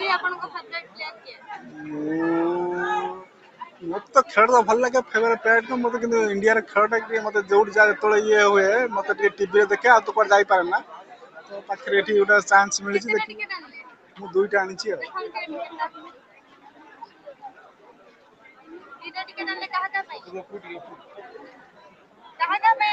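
A noise suppressor built for speech runs on this sound from start to end. It treats steady tones and decaying tails as noise. Level swings of roughly 15 dB follow, so the sound pumps and thins while attacks mostly survive.

The suppressor also cuts specific passages. It pulls them down as if they were noise. The first comes at 0.55 to 1.49 s and drops about 10 dB. Then 3.23 to 3.83 s, 10.82 to 11.87 s and 13.59 to 14.19 s each sink about 12 dB. The longest runs from 15.89 to 19.09 s, also about 12 dB down. Near the end, 20.2 to 20.59 s dips about 10 dB, and 20.84 to 22.4 s about 12 dB. Held parts fade and tails end early.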